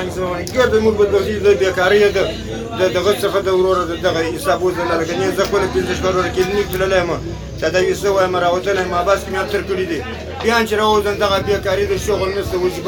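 Nothing in the audio stood out as a technical problem on listening.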